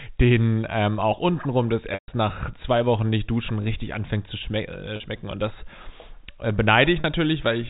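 At 1.94 to 2.08 s, after "ähm auch untenrum das" and before "nach zwei", there is packet loss with pitch repetition. The receiver looped the last pitch period across a 140 ms gap. It sounds like a brief buzzy hold that fades to silence, then a cross-fade back. Shorter 40 ms losses, heard as a slightly held, buzzy note, occur at 4.96 to 5.00 s, after "anfängt zu schme äh", and at 7.00 to 7.04 s. The sizes of these gaps fit 20 ms packets. On a spectrogram, each gap shows flat, evenly spaced harmonic stripes that dim, and the long gap dims into a blank band. The waveform shows identical repeating cycles tapering down, all within the telephone band of the G.711 coding.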